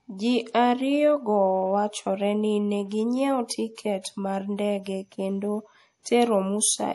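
A speech recording with a watery, swirling quality throughout, where the sibilants take on a metallic chirp and nothing is heard above 11.5 kHz, as if the treble had been sliced off at a fixed frequency. The damage is plainly audible and points to MP3 compression as the likely cause, at a low bitrate that fits something around 48 kbps. Starved of bits, the encoder drops the upper band outright and silences weaker frequency lines, which flicker on and off from one frame to the next and produce the swirl. From 3.75 to 3.78 s, just after "go wachore ni neginyiewo", a hiss of about 29 ms creeps in ahead of a sharp onset, and the attack itself sounds blunted and smeared. This is pre-echo. The onset landed late within a transform block, so quantisation noise scaled for the loud attack was spread across the whole block, including the quiet moment just before it.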